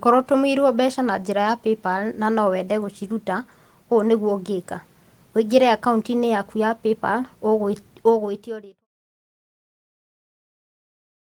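Nothing is technically wrong with the speech here; the level simply fades out smoothly from around 7.5 s to 8.87 s, as an editor would end a take.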